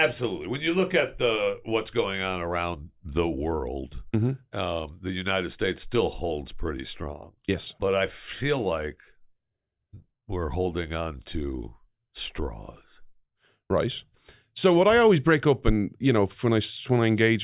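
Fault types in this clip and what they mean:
No technical faults can be heard anywhere in this speech recording. There is nothing in it to list under any fault type.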